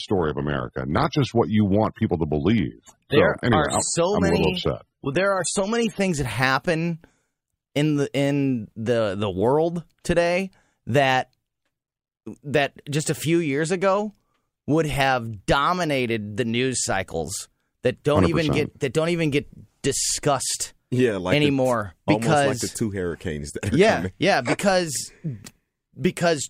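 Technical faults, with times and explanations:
0.0 to 6.0 s, adaptive stream starting at a low bitrate. The speech opens dull, with nothing above 13.6 kHz and stronger codec artefacts. The player began on a cheap version to start fast. The sound suggests an AAC stream near 27 kbit/s. At 6.0 s it switches to one near 96 kbit/s, and quality jumps with no gap.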